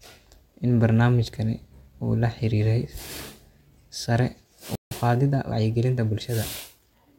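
At 4.75 s the speech just cuts out for about 0.16 s, a playback stall, most likely the player running dry or its thread getting blocked, then resumes at 4.91 s. From there until 6.47 s you get time-compressed catch-up: the player trims and cross-fades tiny slices to clear the backlog, so the speech runs about 1.1 times fast at normal pitch.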